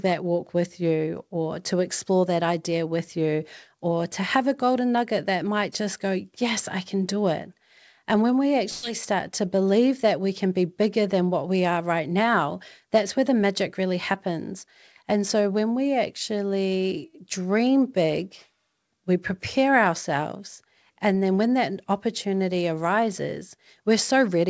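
A speech recording carried over a WebRTC call path, with nothing above 8 kHz, which fits a G.722 wideband codec. At 8.70 to 8.91 s, between "when we" and "start to believe that", there is a burst of packet loss. Several consecutive packets failed to arrive in time, and the receiver's concealment stretched the last sound for about 127 ms, fading it out as the gap grew. About 120 ms of the original audio never arrives, so playback resumes slightly ahead with that stretch missing.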